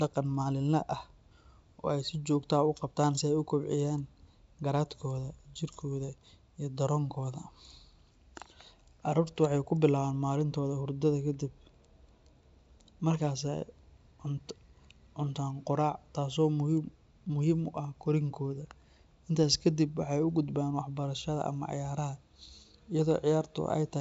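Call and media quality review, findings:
Nothing stood out on listening to this speech, which carries the expected wideband G.722 telephone character with content ending at about 7.7 kHz.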